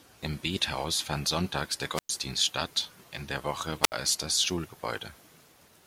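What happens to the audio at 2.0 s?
A wireless microphone squelch dropout runs from 1.94 to 2.10 s: the radio signal fades, hiss rises, the receiver mutes for 105 ms, then speech returns at "statt in der".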